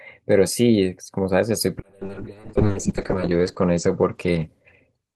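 At 1.83 s a call bitrate drop sets in and lasts to the end of the clip. The bandwidth estimate collapsed, so the encoder fell from 48 kbps to 6 kbps, sitting at its lowest for about 1.0 s, and narrowed the coded band from 20 kHz to 8 kHz. The speech turns muffled and rough, with a watery smear. On a spectrogram the energy above 8 kHz vanishes abruptly, leaving a flat ceiling and blurrier harmonics.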